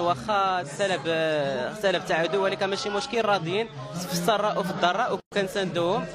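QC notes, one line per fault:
5.20–5.32 s, gap at a join of encoded pieces: the sound drops out for about 119 ms and then resumes exactly where it left off. Two separately encoded pieces were butted together without trimming the encoder's leading delay and final-frame padding, so that silence remains. On the waveform it is a flat stretch with sharp but slightly smeared edges, and on the spectrogram it is a clean vertical blank band cutting across all frequencies.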